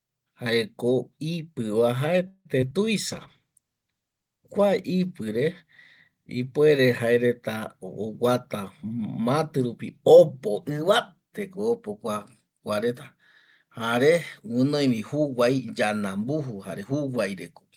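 Call audio freeze at 2.27 to 2.47 s opens a run of network faults in this speech recording: the sound stretches into a fading fill of about 178 ms, ending in roughly 50 ms of silence, then resumes where it stopped with nothing lost. That pattern is most likely packets stalling in transit until the jitter buffer emptied, and the pause leaves the call running about 178 ms later than before. Short concealed packet loss follows straight after, at 2.61 to 2.64 s and again at 2.70 to 2.86 s. Each time about 20 ms of audio never reached the decoder, and the receiver papered over the hole by extending the preceding sound before blending back, heard as a brief smear or wobble. The second event also stretches the timeline by a few tens of milliseconds. Call bitrate drop runs from 3.08 to 6.60 s, when the encoder's budget falls from 32 to 14 kbps after the bandwidth estimate collapsed, bottoming out for about 1.2 s. 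Coarser coding at that rate makes the speech rough and watery, with the top end dulled, until the rate climbs back. Jitter buffer speed-up spans 8.05 to 10.71 s: with excess audio queued, the receiver trims tiny pitch-period slices again and again, so the speech plays about 7% fast at unchanged pitch and sounds slightly hurried, shedding roughly a fifth of a second to pull the delay back down.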